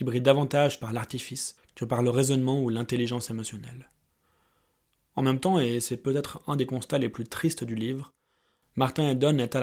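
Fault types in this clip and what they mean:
No technical faults can be heard anywhere in this speech recording. There is nothing to list for it under any fault type.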